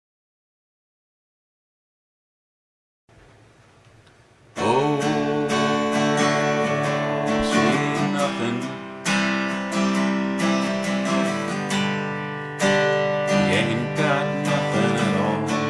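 No technical faults are audible.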